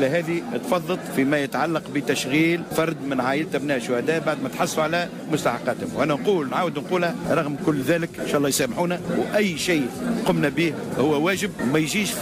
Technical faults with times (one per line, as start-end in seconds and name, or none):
none